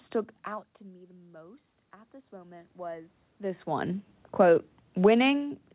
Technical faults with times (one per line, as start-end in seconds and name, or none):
0.45-3.93 automatic gain rising
4.25-5.75 automatic gain falling